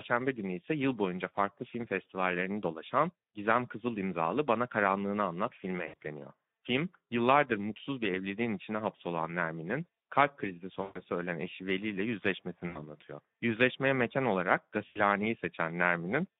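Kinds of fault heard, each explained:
Speex codec: A low-rate speech codec squeezes the sound into a 150 Hz to 3.7 kHz band. The hoarse, noisy texture fits roughly 11 kbps.
VoIP packet loss concealed by the speech codec: The decoder extrapolates across gaps at 5.87, 10.81, 12.67 and 14.87 s. These last 60 to 140 ms, producing a buzzy tone or coloured noise that fades.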